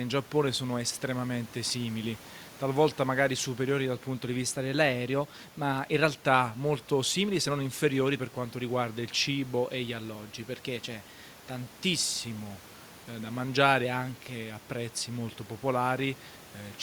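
Speech with room noise about 24 dB below it shows two drift correction steps, 4.43 to 6.18 s (after "superiori dal punto di", before "molto simili se non") and 9.65 to 11.66 s (after "per quanto riguarda il"). In each, playback runs 5.85% fast and pitch rises by about a semitone before snapping back, likely from clock-matching software refilling or draining its buffer.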